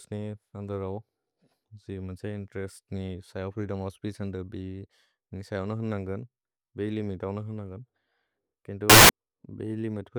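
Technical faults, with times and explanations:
8.90 to 9.09 s, samples built from the wrong bytes: for about 0.2 s the speech turns into a burst of loud, harsh broadband noise. Each sample has been assembled from mismatched bytes, whether shifted by one byte, reversed in order or misaligned, so the rapidly varying low-order bits land in the high-order position and dominate the value. The waveform's structure is lost.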